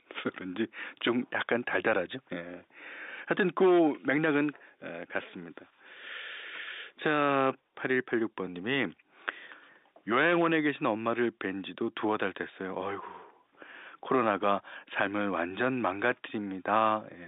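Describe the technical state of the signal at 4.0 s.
At 4.0 s the speech is intact, carried over ordinary G.711 telephone coding that confines it to the line band of roughly 250 Hz to 3.7 kHz.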